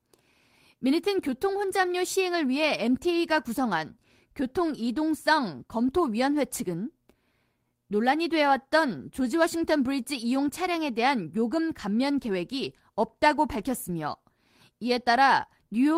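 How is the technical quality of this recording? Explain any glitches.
No glitches are audible anywhere in the recording, so there is nothing to explain.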